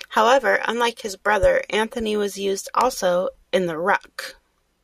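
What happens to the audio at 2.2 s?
Nothing goes wrong at 2.2 s; the speech carries on intact through that moment, with no dropout, click, distortion or other audible fault.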